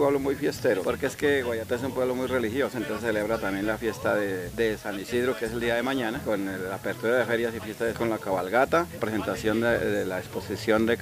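From start to finish, the audio carries low bit depth with dither. It sounds like only 7 bits were used, with dither added before rounding. The rounding error becomes a steady, even hiss, about 20 dB below the sound. There is no audible distortion.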